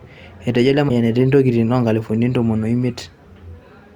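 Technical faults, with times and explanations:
0.88–0.90 s, broken MP3 bit reservoir: a brief disturbance lasting about 27 ms, with the speech skipping ahead past it. The likely cause is that one or more encoded frames went missing, so the next frame reached back into the reservoir for data it had stored in earlier frames and decoded bytes belonging to a different frame instead. The length matches roughly one 26 ms MP3 frame of garbled output before decoding recovers.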